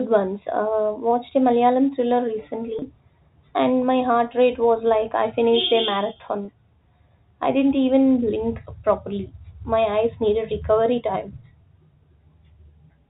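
Packet loss with pitch repetition hits this telephone-band speech at 2.79–2.82 s and again at 6.45–6.48 s, just after "I finished a marathon". Each 30 ms gap, consistent with a single lost packet, is bridged by repeating the last pitch period, giving a brief, slightly held buzz.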